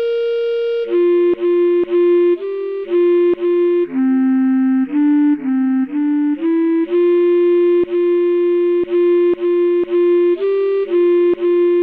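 No technical faults can be heard in this clip. Nothing in the audio points to a problem anywhere along its path.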